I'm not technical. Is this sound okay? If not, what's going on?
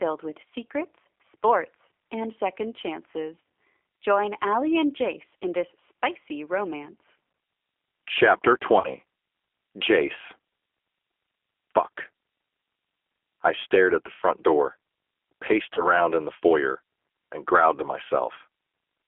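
No, there are two problems with this speech recording.

First, it was sent through the G.729 codec, a phone-call system that shrinks speech by rebuilding it from a rough model of the voice rather than sending the real sound. It also keeps only a narrow phone band, roughly 300 Hz to 3.4 kHz. The result sounds clearly rough, thin and slightly robotic throughout, like a poor internet call, though the speech stays understandable.

Second, there is VoIP packet loss concealed by the speech codec. Small chunks of the call never arrived, and the receiving end filled each gap by guessing from the sound just before it. You hear this as a brief buzzy or smeared blip that fades, with the voice sounding weak or odd for a moment afterwards. The gaps are about 20 ms long at 1.11 to 1.13 s and at 15.74 to 15.88 s, and about 40 ms long at 3.41 to 3.45 s and at 8.8 to 8.89 s.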